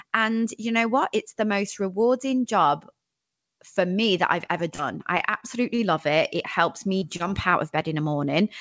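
It's a speech recording over a call link, and the band stops at 8 kHz, which fits a wideband codec like G.722 at 64 kbps. Two spots of short concealed packet loss come first. Right after "for me that I've", from 4.46 to 4.51 s, about 30 ms of audio never arrived, and the receiver patched it by carrying the last sound forward for about 25 ms before blending back. The same happens after "me that I've ever", from 4.75 to 4.81 s, with about 30 ms lost and a 30 ms patch. Each comes across as a quick smear or wobble, and a brief bit of the speech is simply gone. Then there are three short stalls from late packets, at 5.17 to 5.22 s, 5.40 to 5.45 s and 5.75 to 5.94 s. Nothing is lost in these. The jitter buffer ran dry, so the last sound got held for about 18, 20 and 29 ms until the packet turned up, which gives that slightly drawn-out, buzzy hitch. In the third one the playout then catches up by trimming roughly 23 ms. 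Finally, from 6.99 to 7.55 s there's repeated packet loss with the classic robotic sound. There are four separate gaps, about 60 ms missing in total with the longest around 32 ms, and they're patched with about 83 ms of concealment, roughly 15% of that stretch. The result is choppy, with bits of the speech dropping out.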